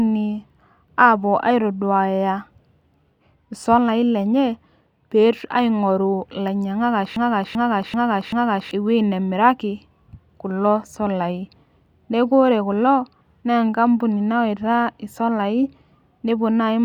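At 7.16 s the speech locks into a broken-record loop: a short slice, about 387 ms long, plays four times back to back, identical each pass, until the audio picks up again at 8.71 s. It has that stuck, stuttering feel, and whatever should have been said in those one and a half seconds is simply gone. The likely cause is a player or stream stall that kept resending the last fragment it had buffered.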